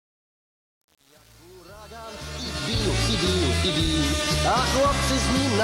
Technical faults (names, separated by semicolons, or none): truncation distortion on a fade